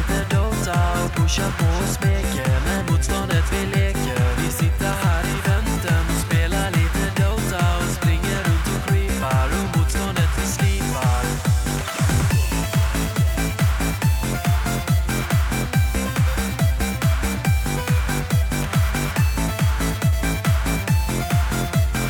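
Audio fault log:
Nothing here to flag, as no faults turn up anywhere in this audio.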